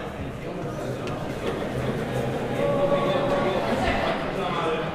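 From 1.29 to 4.11 s, a dry copy trails about 0.4 s behind, a few dB quieter, starting and stopping abruptly: a doubled audio track, likely a second, slower capture path.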